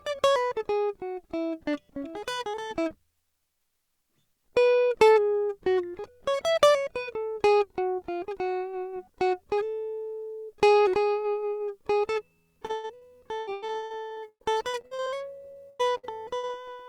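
From 12.65 to 16.65 s the music breaks up with repeated packet loss (robotic sound): 28 gaps, the longest 116 ms, each patched by stretching the previous sound, so about 30% is concealed. Unlike a single dropout, the holes keep recurring, giving a choppy stutter.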